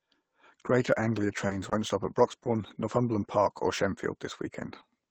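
Sample clock jitter runs through the whole speech clip. The converter's clock wanders by a few microseconds, so samples land slightly off time, leaving a faint hiss about 40 dB below the signal. It thickens on loud, bright passages and disappears in pauses. On a spectrogram it appears as a diffuse high-frequency haze that follows the signal's energy.

Short concealed packet losses occur at 1.47 to 1.51 s, at 1.69 to 1.73 s just before "stop at", and at 2.43 to 2.47 s. In each, 20 ms of audio never arrived and the decoder extended the preceding sound to cover it. The result is a brief smear or wobble. A spectrogram shows harmonics held unnaturally flat, or a patch of shaped noise where detail should change.

A lost packet rebuilt from error correction covers the second 20 ms of each of those three events: 1.49 to 1.51 s, 1.71 to 1.73 s, and 2.45 to 2.47 s, just after "stop at". It also appears on its own at 1.63 to 1.65 s and 2.29 to 2.31 s. 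In each case a low-bitrate copy carried in the next packet filled the gap, so there is no dropout, only a rough, grainier 20 ms slice. On a spectrogram these slices look coarser and noisier than the frames around them. The Opus call path's 8 kHz band limit is visible throughout as a clean ceiling.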